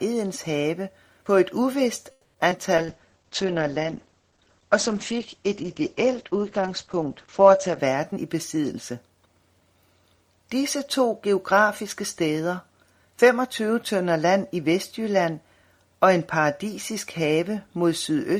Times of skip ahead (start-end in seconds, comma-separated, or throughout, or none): 2.50-2.53